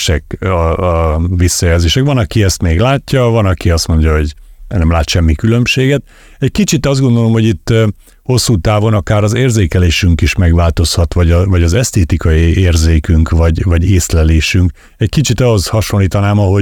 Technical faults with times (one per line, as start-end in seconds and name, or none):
none